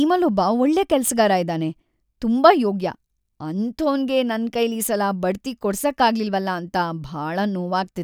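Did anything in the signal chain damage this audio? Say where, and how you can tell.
No, nothing in this speech recording stood out as damage from any stage of the signal chain when I listened to it.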